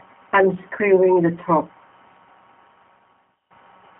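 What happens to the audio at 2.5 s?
At 2.5 s you're in the middle of a loudspeaker feedback squeal that runs from about 1.09 s to 3.54 s. The mic is hearing its own speaker, and at 5 kHz the loop gain tops one, so a single tone swells over roughly two seconds until it's about as loud as the speech.

Under that, the whole clip has gone through the G.729 codec at 8 kbit/s. It rebuilds speech from a vocal tract model and a few pulses per frame, limits the band to roughly 200 Hz to 3.4 kHz with nothing above 3.7 kHz, and leaves a plainly rough, synthetic edge.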